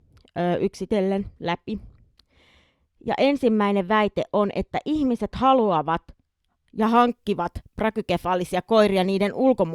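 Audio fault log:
0.00–6.83 s, de-emphasis applied wrongly: a treble-cut filter intended to reverse pre-emphasis was run on speech that had none, or ran a second time, so the response rolls off smoothly toward the top end, down about 11 dB at 10 kHz relative to 1 kHz. With the upper consonant detail and air taken away, the speech comes across dull and muffled, as if heard through cloth, until the filtering stops just before "hankkivat prakykefaalisia", where the brightness returns.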